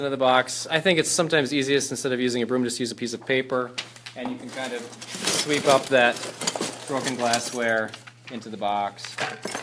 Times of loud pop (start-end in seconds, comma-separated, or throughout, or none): none